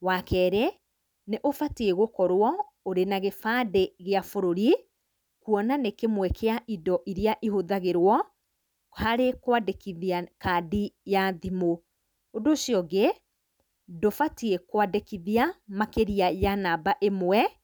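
Speech recording with no audible technical faults.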